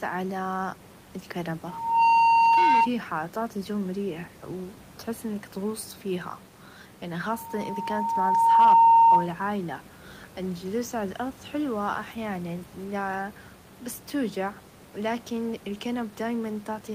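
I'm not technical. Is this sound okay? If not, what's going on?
No, there's loudspeaker feedback squeal: a steady 916 Hz tone swells up from 1.66 to 2.89 s, just before "تعطي چو مريح و", and again from 7.28 to 9.32 s, right after "إنك تغوص فيها يعني". The microphone is picking up its own speaker and looping.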